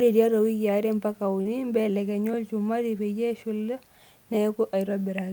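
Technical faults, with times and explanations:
1.41–1.47 s, short concealed packet loss: about 40 ms of audio between "tiatwa wikii are mpaka" and "mbelekenyu olchumati peyie eshula" arrived too late to decode, so the receiver synthesised roughly 37 ms by extending the preceding sound, then crossfaded back, leaving a brief smeared blip.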